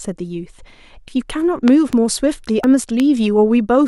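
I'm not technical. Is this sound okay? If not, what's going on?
No. The speech has two kinds of fault.

At 1.08 s and again at 2.64 s there is a dropped buffer (overrun). The recording skips forward with no gap, losing roughly 40 milliseconds at the first spot and roughly 70 at the second. This likely happens when the computer falls behind collecting sound from the audio hardware, so a chunk is overwritten before it is saved and the pieces on either side are joined together.

There are also loud pops. Two sharp pops fall between 1.68 and 1.95 s, and one more comes at about 3.0 s. Each stands well above the level of the speech, which carries on underneath. They sound like an electrical jolt added on top of the recording, likely the kind made by a plug being moved, a switch, static, or a brief glitch in the audio equipment.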